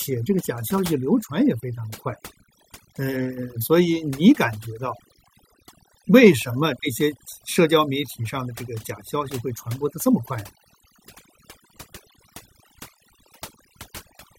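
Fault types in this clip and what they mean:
overdone noise removal: Background between phrases drops and breaks up into twinkling specks, because over-strong noise reduction is cutting individual frequency bands near its noise estimate.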